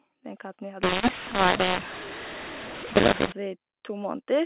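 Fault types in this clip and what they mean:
mu-law and A-law mixed up: G.711 audio coded as mu-law but decoded as A-law, so levels get scrambled. From just after "katten vi", 0.83 to 3.32 s, the speech turns harsh and gritty, and even quiet gaps fill with hiss.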